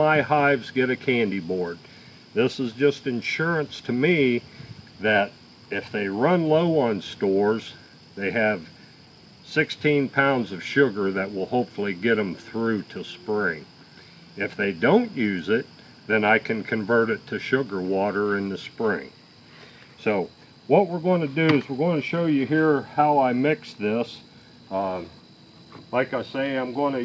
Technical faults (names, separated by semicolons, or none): none